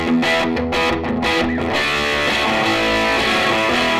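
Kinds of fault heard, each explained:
No technical faults can be heard in this recording.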